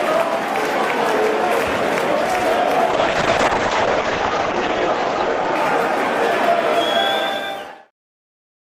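Between 2.91 s and 6.86 s the audio shows a call bitrate drop: the encoder was forced to spend far fewer bits, so the sound turns coarse and watery, and the top end is cut off above 8 kHz, down from a full 20 kHz. The roughness fits a fall from around 48 kbps to around 8 kbps, with the worst stretch lasting about 1.13 s. Unlike packet loss, nothing drops out or repeats.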